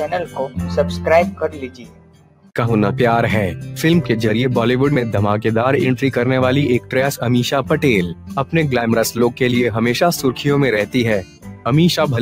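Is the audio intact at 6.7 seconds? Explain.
No. A noise suppressor applied to music or sounds is at work at 6.7 seconds, as it is throughout. Built for speech, it treats sustained tones and ambience as noise and pulls them down by around 10 dB, so attacks pass while held sound and tails sink, and the sound pumps, flutters or thins out.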